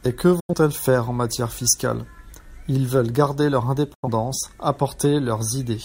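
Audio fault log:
0.40–0.54 s and 3.94–4.08 s, digital broadcast dropout: the receiver lost about 85 ms of data, which fits a couple of failed frames, and muted. The speech fades out in about 8 ms, falls silent before "faire en matière fiscale" and after "veulent garder leur", and that speech is lost.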